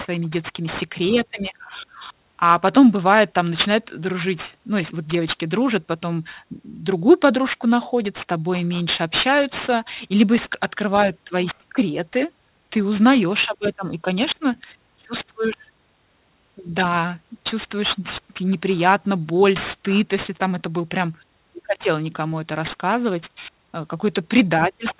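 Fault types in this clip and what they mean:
aliasing: the speech was brought down to an 8 kHz rate without a proper anti-alias filter, so energy above 4 kHz folded back below it. Sibilants turn gritty and metallic, with spurious tones sitting only about 15 dB under the speech, and the spectrum runs hard to the 4 kHz edge.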